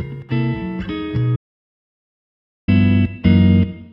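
A recording of sounds with an audio dropout to silence from 1.36 to 2.68 s: about 1.32 s of dead silence with no room tone, unlike a natural pause, likely from lost input.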